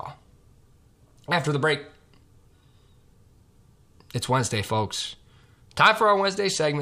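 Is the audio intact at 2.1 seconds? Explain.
Yes, the audio is intact at 2.1 seconds, with no fault at that moment.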